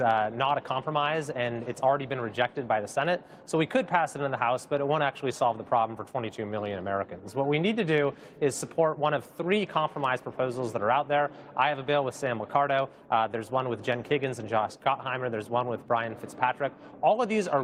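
No technical faults are audible.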